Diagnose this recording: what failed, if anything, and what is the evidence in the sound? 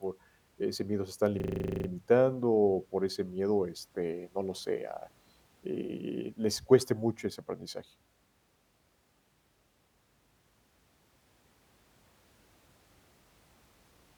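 The driver or buffer stage failed with a system hang loop. From 1.4 to 1.88 s, one 40 ms slice of the speech repeats 12 times, giving a 25 Hz buzzy stutter. The host stalled while the hardware kept replaying its ring buffer, and practically nothing was lost.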